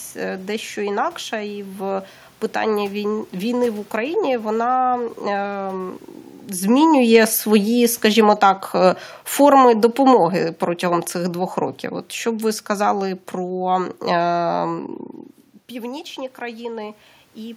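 From 6.63 s to 11.1 s the automatic gain falls. The gain control judges the input too loud, or its background noise too strong, and eases its gain down by about 6 dB, so the speech and the room noise sink together. On the waveform the envelope tapers steadily, and on a spectrogram the background band darkens alongside the speech. A talker movement around 6.5 s sounds similar, but there only the voice changes.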